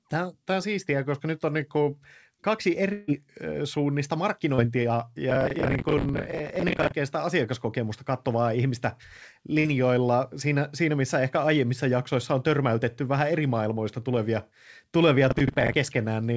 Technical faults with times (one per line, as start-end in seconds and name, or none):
2.93-3.11 burst of packet loss
4.55-4.61 short concealed packet loss
5.30-6.92 processor overload crackle
9.59-9.67 burst of packet loss
15.31-15.76 processor overload crackle